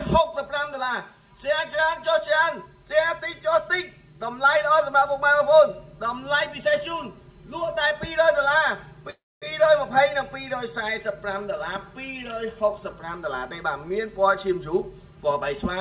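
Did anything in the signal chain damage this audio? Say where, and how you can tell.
Yes. Channel delay (comb filtering) runs through the whole clip: one channel arrives roughly 5 ms late, and the mono sum cancels shared content at evenly spaced notches starting near 100 Hz, giving a fixed hollow, phasey colour. This points to a wiring or routing stage before the sum.

A call audio freeze sits at 9.1 to 9.44 s, likely a network stall that emptied the jitter buffer. About 316 ms is filled, mostly 250 ms of silence after the concealment fades, then the audio resumes where it stopped with nothing lost, just pushed later. The 4 kHz ceiling fits a narrowband G.711-style call codec.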